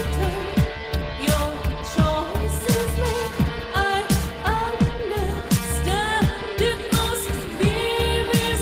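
No technical faults can be heard anywhere in the audio.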